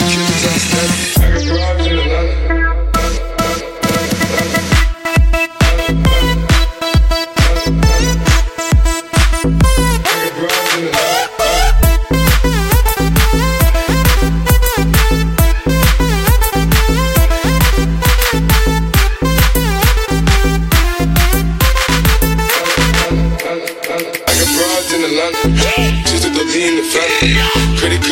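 The signal holds steady for the whole recording, with nothing in it that points to a technical fault.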